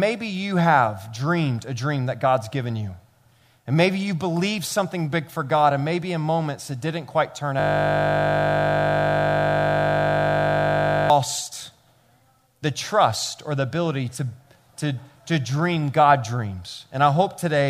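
From 7.60 to 11.10 s, a system hang loop repeats one 20 ms slice of speech about 175 times, giving a steady 50 Hz buzz rather than a stutter.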